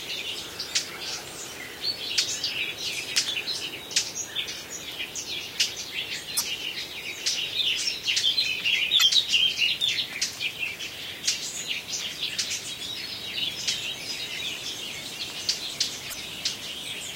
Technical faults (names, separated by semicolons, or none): damaged data in a compressed stream